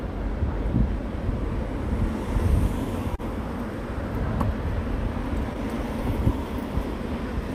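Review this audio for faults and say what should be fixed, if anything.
Clock drift between sender and receiver runs through the whole recording of everyday sounds. The sender's clock is slower than the receiver's by roughly one and a half percent, so the jitter buffer keeps draining and the receiver has to pad the stream with repeated material. This shows up as small, unevenly spaced timing hiccups. On a waveform, they look like slight discontinuities or duplicated fragments. On a spectrogram, they appear as faint vertical seams. Locking both ends to a common reference clock, or resampling to compensate, would prevent it.

A short stall from a late packet occurs from 3.15 to 3.21 s. A packet arrived after it was due, the buffer ran empty, and the receiver held the preceding sound for 30 ms until the packet came in. Nothing is lost, but that moment is stretched and carries a slight buzz or dip. 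On a spectrogram, it shows as a brief horizontal smear of frozen spectral content. On a waveform, it looks like a short repeated, periodic segment. A slightly deeper jitter buffer would absorb this 30 ms delay change.

Repeated timing corrections run from 4.88 to 7.42 s. The receiver plays at 99% speed, inserting small repeated slices that add up to roughly 40 ms so that it stays in step with the slower sender. All the edits go the same way but are irregularly spaced, so they amount at most to faint hiccups and a slightly dragging tempo. On a spectrogram, they show as scattered thin seams. On a waveform, they appear as small duplicated cycles. Smooth, continuous resampling instead of discrete slice insertion would prevent this.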